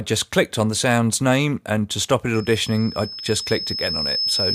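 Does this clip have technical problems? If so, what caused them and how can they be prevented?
Yes. From 2.34 s to the end of the clip at 4.54 s, a single tone at 5.2 kHz rises over roughly two seconds until it is about as loud as the rest of the sound. This is loudspeaker feedback squeal: a microphone is picking up the loudspeaker it feeds, and at that one frequency the loop gain has passed unity, so the tone keeps building on itself. To prevent it, lower the gain or move the microphone away from the loudspeaker, or notch out 5.2 kHz.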